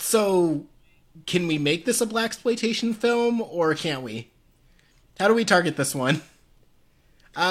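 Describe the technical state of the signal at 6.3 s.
At 6.3 s the speech signal is intact, with no audible dropout, distortion or other fault at that moment.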